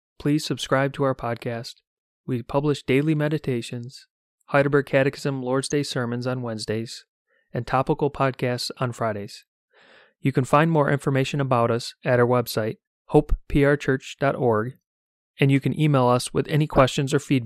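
At 5.63 to 5.72 s, and again at 16.75 to 16.81 s just after "you can email us", there's DAB burbling. Weak reception let bit errors slip into the MP2 data, so individual sub-bands get short blips of noise.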